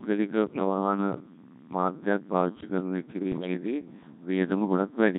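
Codec 2 vocoder coding runs through the whole speech clip, and the heavy buzzy, robotic quality suggests a rate around 1.6 kbit/s. The decoder never receives the waveform, only pitch, voicing, energy and a coarse spectral envelope per frame, and rebuilds the voice from sine waves. Natural texture is gone, so the speech sounds synthetic and metallic and anything that isn't a single clean voice smears. Bit errors on digital voice radio break in from 3.32 to 3.54 s. The damage spans about four vocoder frames, which fits an error rate somewhere near 7 percent. At this low rate each flipped bit alters the pitch, level, voicing or spectral shape of an entire frame, so over those 0.22 s the voice lurches in pitch and loudness, changes tone colour abruptly, and collapses into warbling, bleepy robotic gibberish.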